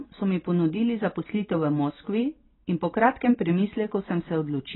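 From start to finish the speech sounds dull and smeared, with nothing above 4 kHz and a warbly, fizzy edge on sibilants. That's heavy damage, likely from AAC compression at a very low bitrate, around 16 kbps, where the encoder drops the top end and starves the remaining bands.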